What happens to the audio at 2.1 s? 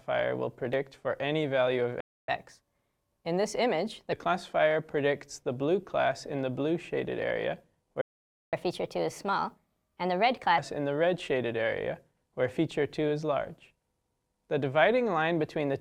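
At 2.1 s the audio is in the middle of a playback stall. The sound stops abruptly at 2.00 s and the output stays silent until 2.28 s. That gap lasts about 276 ms, long enough to hear as a clear hole. The player likely ran out of data, or its playback thread was briefly blocked. With nothing to send, the output falls silent. It then picks up again once data flows.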